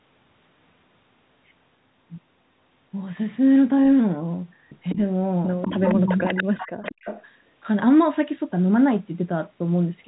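Echo leak at 4.89–4.96 s and 5.62–5.95 s: a delayed copy of the voice returns about 196 ms late, likely from loudspeaker pickup the echo canceller missed. It sits about 15 dB below the speech, then louder at only about 5 dB below.

Speech suppressed in double talk from 6.06 to 6.39 s: the voice drops in pieces by up to about 30 dB, roughly a fifth of a second in all, likely because the canceller turned the talker down along with the echo.

Echo leak returns from 6.25 to 7.24 s, the same 196 ms copy about 15 dB down.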